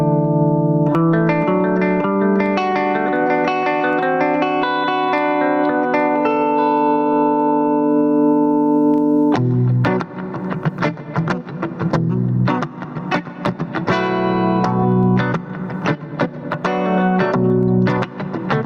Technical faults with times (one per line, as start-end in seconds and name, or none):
0.00-18.65 gain pumping